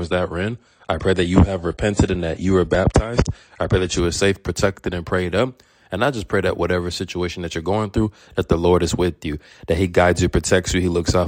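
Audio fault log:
0.00–4.00 s, adaptive stream starting at a low bitrate: for the first four seconds nothing sounds above about 10.2 kHz, the top end is thin and swirly, and coding artefacts are plain, which fits a start near 32 kbit/s AAC. At 4.00 s the treble and clarity return at once, consistent with a step up to roughly 96 kbit/s. Unlike a rebuffer or a mid-stream downgrade, it occurs at the very start, improves rather than worsens, and leaves no gap or stall.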